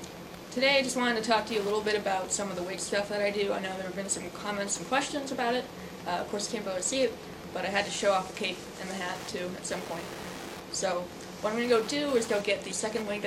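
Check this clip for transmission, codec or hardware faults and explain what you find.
One hardware fault runs through the whole clip. Wi-Fi interference: a nearby radio's beacon, rectified by the circuit, ticks every 102.4 ms, about 20 dB below the sound, slower than a mobile-phone buzz.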